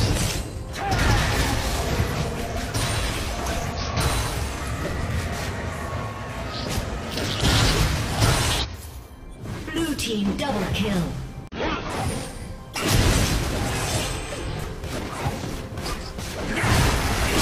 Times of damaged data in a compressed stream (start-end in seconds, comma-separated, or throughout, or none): 1.86-1.90, 3.72-3.78, 8.59-8.66, 11.47-11.53, 14.59-14.64